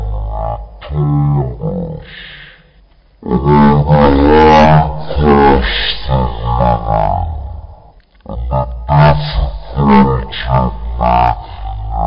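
Throughout the clip, the samples are clocked out at one third of the rate they were captured at, with no resampling in between, which fits 48 kHz material being played back as if it were 16 kHz. This is a wrong sample rate fault. Because speed and pitch are tied to the same clock, everything runs at 0.333 times normal speed and drops by 19 semitones, so the sound comes out heavily slowed, dragged out and deep.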